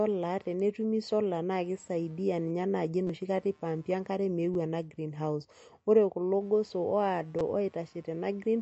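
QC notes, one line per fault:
throughout, computer activity noise: a faint buzz pulsing around 150 Hz, about 40 dB below the speech, from computer load shifting the shared audio ground.
throughout, MP3 compression: nothing above 8.1 kHz and a plainly audible watery swirl, likely from low-bitrate MP3 encoding cutting the treble and dropping weak frequency lines.
3.07–3.09 s, 4.54 s and 7.39 s, repeated buffer: a click or brief buzz after "naa kisaidia ninye naaji", then before "ena greenhouse ore kulo", then at 7.39 s. Each time a roughly 6 ms chunk replays with hard joins, which fits a 256-sample buffer, and around 10 to 20 ms of audio is lost.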